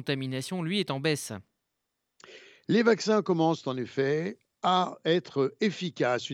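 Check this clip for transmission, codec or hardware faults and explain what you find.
Nothing stood out on listening to this speech clip.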